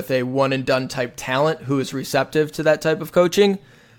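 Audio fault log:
Nothing to log here, as the speech comes across without anything going wrong at any point.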